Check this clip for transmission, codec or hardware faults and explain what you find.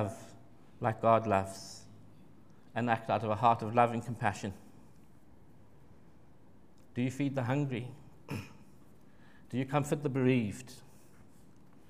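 No faults detected here.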